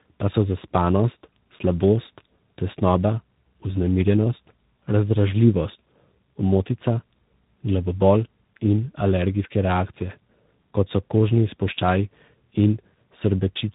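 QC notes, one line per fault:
Throughout: tandem speech coding, two lossy speech coders in a row, each re-coding the last one's damage, hence rough, warbly, muffled speech with nothing above 3.8 kHz.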